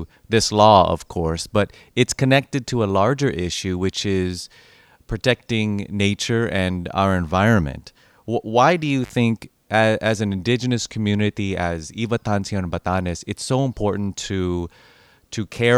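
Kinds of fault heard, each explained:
intermittent contact: at 9.04 s, after "why do you", the speech drops out for about 50 ms as a loose connection briefly opens, crackle marking each edge.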